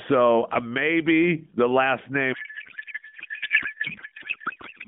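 At 2.34 s, after "uh maybe the last", a codec payload misread starts: octet-aligned AMR frames are parsed as bandwidth-efficient, turning speech into garbled warble, with harmonics smeared into shapeless energy on the spectrogram.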